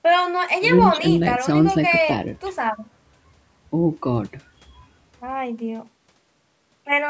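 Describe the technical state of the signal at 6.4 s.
At 6.4 s the speech signal is intact, with only the expected band limit of call microphone processing, which leaves nothing above 8 kHz.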